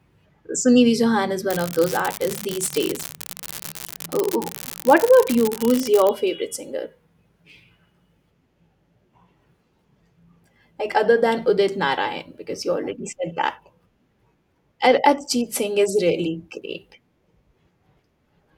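From about 1.45 s to 6.09 s there's an unreliable data bit: one data line in the converter path is marginal, so that bit flips in a random share of samples. Each wrong bit adds a spike of identical size, and together they make a steady crackly fizz that runs right through the pauses for those 4.6 seconds, stopping just before "favorite singer". It's constant grit, not the occasional isolated click.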